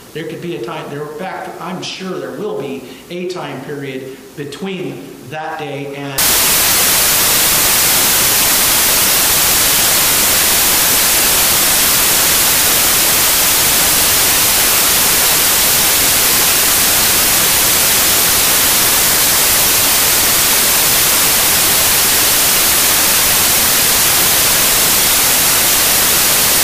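Up to about 6.18 s things are intact, but from there right through to the end the samples are built from the wrong bytes. The reader is stitching each sample together wrongly, maybe a byte out of step or with the byte order flipped, so the busy low-order bits land in the most significant position. What you get is a wall of loud, harsh broadband noise, close to white on the louder passages.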